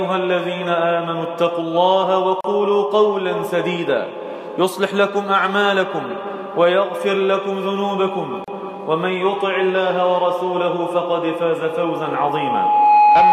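At 2.41 s and again at 8.44 s the sound drops out for about 37 ms and 34 ms respectively, six seconds apart. These are gaps at the joins of encoded pieces: the audio was encoded in six-second segments that were butted together untrimmed, so each join keeps the encoder's start-up delay and the padded final frame as silence. The codec smears the edges of each gap, and the sound resumes exactly where it left off.

From 11.64 s to the end, a loudspeaker feedback squeal takes over. A microphone is picking up the loudspeaker it drives, and at 838 Hz the loop gain exceeds one, so that single tone reinforces itself on each pass. It swells over roughly a second and a half into a steady whistle sitting around 10 dB above the program sound, and it is still sounding when the clip ends.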